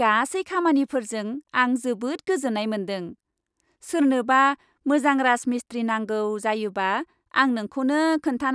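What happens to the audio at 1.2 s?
Nothing goes wrong at 1.2 s; the speech carries on intact through that moment.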